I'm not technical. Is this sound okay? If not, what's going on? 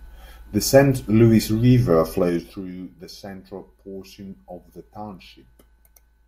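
No. From 2.13 to 2.71 s, right before "the central portion of", the speech drops in volume in about ten little jumps a second, leaving a ticking zipper noise.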